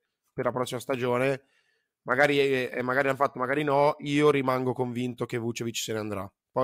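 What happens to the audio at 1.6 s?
Nothing goes wrong at 1.6 s; the speech there plays through intact, with no dropout, click or distortion.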